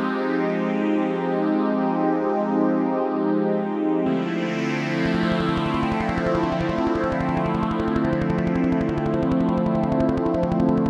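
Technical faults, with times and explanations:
5.06–10.87 s, train of clicks: a regular ticking starts midway and runs to the end at about 11.7 clicks per second, some seventy pulses in all. Each click has much the same sharp shape and rises roughly 5 dB above the surrounding sound, so it sits on top of the audio and stays audible through quieter passages. The steady spacing of identical pulses most likely points to electrical interference from nearby equipment or a faulty connection or power supply.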